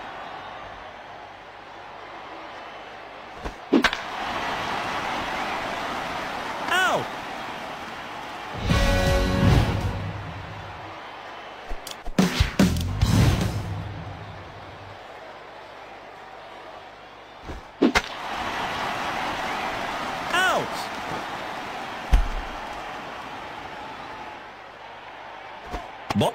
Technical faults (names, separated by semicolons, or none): damaged data in a compressed stream